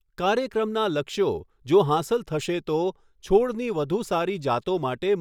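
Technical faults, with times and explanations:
No technical faults are audible anywhere in this recording.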